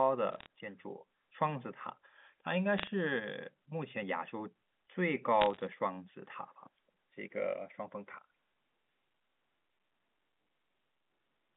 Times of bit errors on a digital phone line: 0.32-0.46, 2.78-2.87, 5.41-5.61

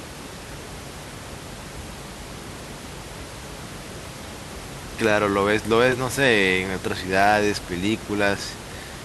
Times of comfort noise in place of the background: none

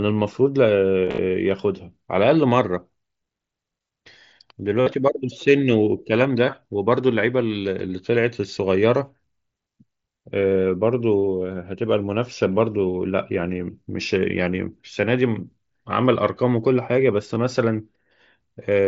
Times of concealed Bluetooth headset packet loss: 1.05-1.18, 4.80-4.87, 10.62, 17.35

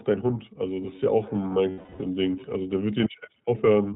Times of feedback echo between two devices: 0.90-2.57

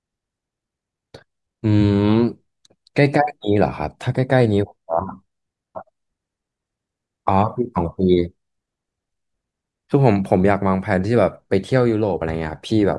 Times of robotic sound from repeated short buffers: none

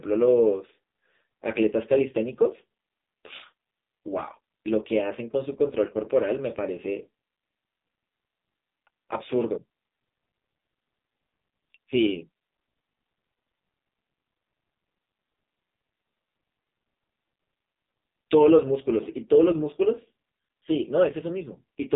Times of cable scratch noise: none

